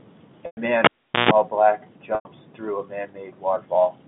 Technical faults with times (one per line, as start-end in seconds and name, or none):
0.46-0.57 packet loss with pitch repetition
0.84-1.31 cable pulled and plugged in
2.15-2.25 packet loss with pitch repetition